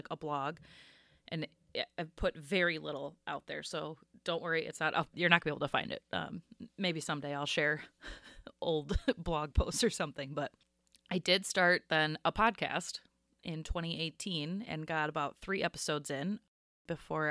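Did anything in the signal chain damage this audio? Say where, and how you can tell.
No, nothing in the signal chain damaged this audio.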